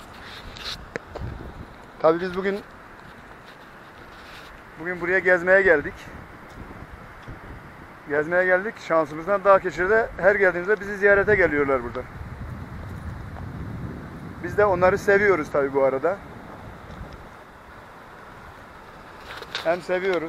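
No faults found in this audio.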